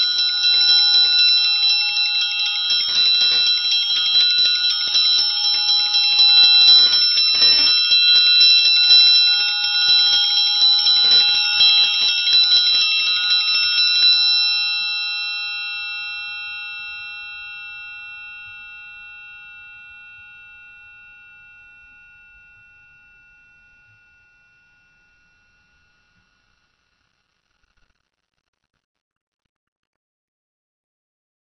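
From the start and through the whole piece of music, the sound is dull and nothing is heard above about 6 kHz. Sustained tones warble and turn fizzy and smeared. That points to AAC compression, likely AAC-LC at a very low bitrate around 24 kbps, where the encoder drops the high band and coarsely quantises what remains. Unlike a simple low-pass filter, which only darkens, this also leaves watery, swirling artefacts in the remaining range.

From 0.03 s to 14.1 s there is hard clipping. The signal overdrives a stage by about 7 dB, so its peaks are cut flat. Every loud passage carries a harsh, buzzy fuzz rather than occasional clicks. The rough edge comes from added harmonics, not from lost ones, which sets it apart from the codec's dulling. It stops after 14.1 s, while the codec dullness carries on.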